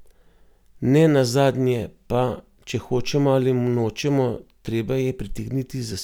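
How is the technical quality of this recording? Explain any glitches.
No audible glitches or faults.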